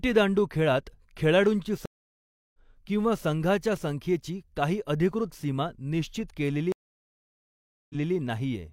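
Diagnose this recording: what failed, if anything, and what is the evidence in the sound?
The failure is at the network stage: two stream reconnects. At 1.86 s the speech cuts to silence for 684 ms, then resumes at 2.58 s roughly half a second further on, so material is skipped. At 6.72 s a longer gap of 1.18 s follows, and at 8.15 s playback picks up 256 ms earlier than where it stopped, repeating a short stretch. Each time the connection dropped, the player reconnected and restarted decoding mid-stream.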